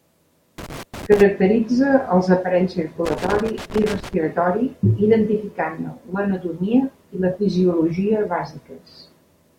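Speech with loose connector crackle at 0.58–1.21 s and again at 3.06–4.14 s, right after "els aparells". A worn contact making and breaking chops the signal into irregular scratchy bursts, unlike the evenly spaced clicks of a digital buffer fault.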